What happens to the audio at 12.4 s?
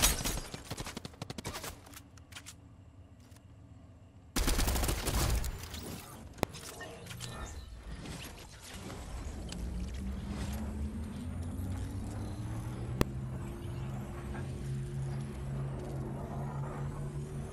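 Nothing goes wrong at 12.4 s; the audio carries on intact through that moment with no audible fault.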